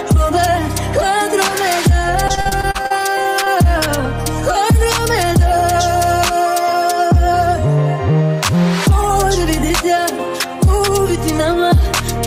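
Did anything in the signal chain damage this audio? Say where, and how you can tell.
Yes. From 2.27 to 3.48 s the sound turns choppy, with about ten short dropouts, none longer than about 39 ms. Each hole is bridged by stretching the preceding sound, which gives the stuttering texture. About a fifth of that stretch is patched-in material. This is repeated packet loss at the network stage: packets kept arriving late or not at all, and the receiver's concealment filled most of the gaps.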